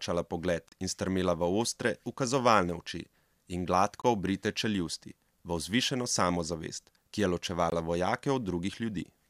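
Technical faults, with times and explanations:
0.68–0.72 s, 4.02–4.04 s and 7.70 s: gap at a join of encoded pieces. Silences of about 35, 22 and 20 ms cut into the speech before "in strmela v ostre", before "obrite čeljusti" and after "vzvišeno samozavest ki je". Each piece was encoded separately, and the encoder's start-up delay and final-frame padding were left in at each join. On a waveform this shows as a flat gap with abrupt, slightly smeared edges; on a spectrogram, as a thin blank vertical stripe across all frequencies.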